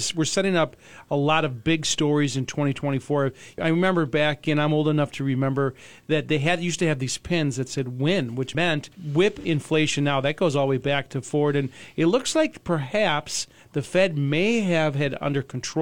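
At 9.40–9.45 s, AAC frame loss with concealment patches a 43 ms gap, fitting one frame, from the prior spectrum: a smeared blip, blurred on the spectrogram.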